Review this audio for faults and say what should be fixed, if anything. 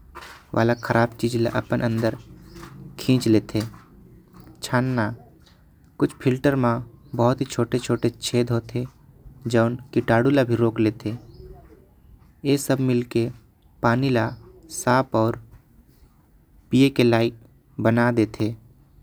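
No faults detected; nothing needs fixing.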